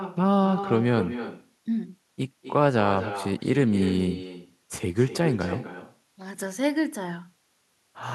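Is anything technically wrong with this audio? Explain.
Yes. Echo with no canceller runs throughout: the far end plays the call over a loudspeaker, its microphone picks it up, and nothing strips it out. Each phrase returns roughly a third of a second later, about 10 dB quieter and thinner.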